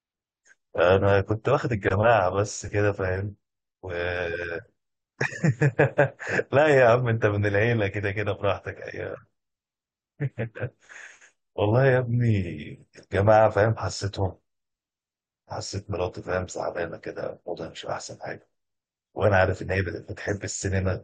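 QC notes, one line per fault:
16.78 s, overlap between stream segments: a tiny skip where about 12 ms of the speech disappears and the waveform jumps straight to later material. It falls on a boundary between 2-second stream segments whose timestamps overlap, so the player trims sound that was never actually duplicated. Unlike a dropout, no silence or gap is inserted; audio is removed and the timeline closes up, so it is an abrupt splice with a short stretch of sound lost.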